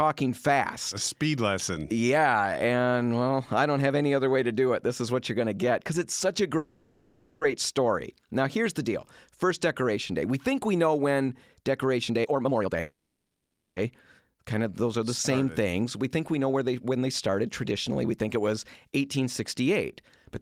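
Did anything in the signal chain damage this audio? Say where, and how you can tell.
Yes. At 6.57 to 7.43 s, right after "because it's such a", the speech stops and the last sound is drawn out as a fading buzz or hiss for about 0.84 s. At 12.80 to 13.78 s the same thing happens for 0.96 s, and the extension decays into silence for the final 0.75 s. Afterwards the speech resumes exactly where it left off, with nothing lost. This is a call audio freeze at the network and jitter-buffer stage, likely caused by delayed packets emptying the buffer while the receiver padded the gap.

From 12.09 to 12.80 s the speech rushes at roughly 180% of normal speed with its pitch unchanged, dropping about half a second of material. From 16.38 to 17.47 s, after "think we", there is a milder hurry at about 109%, removing roughly a tenth of a second. This is jitter buffer speed-up: with too much audio queued, the receiver repeatedly cut out pitch-period-sized slices to shrink the delay. 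The first burst follows the earlier freeze and leads straight into the second one.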